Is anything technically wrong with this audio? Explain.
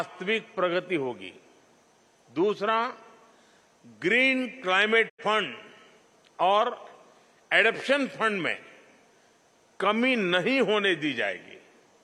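Yes, there's a digital broadcast dropout from 5.08 to 5.23 s. The receiver lost a stretch of bad frames, which fits about two, and muted with a quick 20 ms fade. Roughly 85 ms of sound simply vanishes before the audio picks back up mid-stream.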